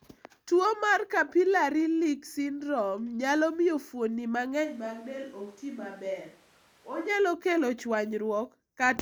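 Right after "syndrome nyalo miyo fuonni", from 4.66 to 7.08 s, the voice turns abruptly roomy and hollow, loses bass and drops by about 10 dB, with room noise rising to about 25 dB below the speech. This is likely a switch to a distant microphone. The instant changes at both ends set it apart from added reverb.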